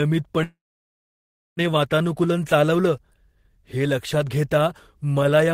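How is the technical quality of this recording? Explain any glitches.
The recording has one clear glitch, a call audio freeze from 0.43 s to 1.60 s. The speech stops mid-flow, the last sound smears briefly into a fading buzz, and then there is about a second of silence before it resumes with "वातानुकूलन चालवलं". The likely cause is delayed packets draining the jitter buffer. The receiver filled the wait, about 1.14 s, and then carried on from where it stopped, so nothing is lost but everything after arrives that much later.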